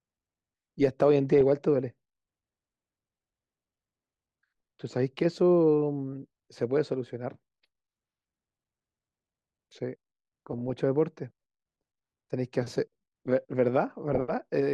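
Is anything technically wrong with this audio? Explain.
Yes, the speech has DAB burbling in four short bursts: 1.32 to 1.41 s, 4.44 to 4.61 s, 10.53 to 10.80 s, and 14.08 to 14.21 s. Weak reception lets a small fraction of a percent of bit errors slip past error correction. Corrupted MP2 samples put short noisy blips in single sub-bands, and corrupted scale factors make sub-bands jump in level for up to a frame.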